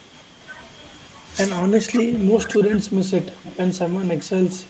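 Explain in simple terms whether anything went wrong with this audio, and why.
The speech keeps sinking and thinning out at 1.62 to 2.12 s, 2.45 to 2.91 s, 3.36 to 3.44 s and 3.84 to 4.03 s. That's speech suppressed in double talk, likely an echo canceller that mistook this voice for echo while someone else spoke, and turned it down.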